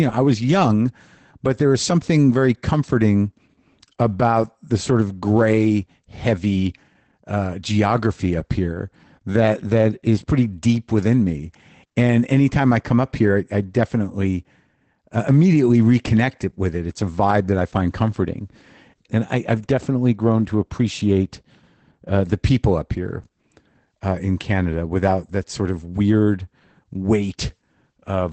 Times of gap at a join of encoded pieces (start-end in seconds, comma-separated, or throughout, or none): none